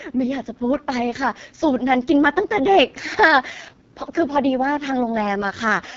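From start to finish the speech carries the sound of the AMR wideband (HD Voice) codec at a very low rate. The damage is heavy: voiced sounds turn rough and raspy, because the pulse-driven vocal tract model has too few bits to reproduce the excitation cleanly, which fits the lowest 6.6 kbit/s mode. The top band above 6.4 kHz is synthetic noise rather than real detail, and nothing is present above 7.4 kHz.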